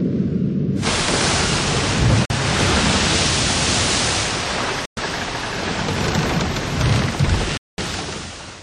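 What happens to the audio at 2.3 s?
A Bluetooth dropout cuts the sound out from 2.25 to 2.31 s, leaving a silent gap of roughly 50 ms. It was likely caused by audio packets arriving at the headphones too late and being discarded, which fits a couple of lost packets. Unlike a buffer underrun, which pauses and then continues from the same point, this gap skips ahead. The sound returns as though it had kept playing through the hole.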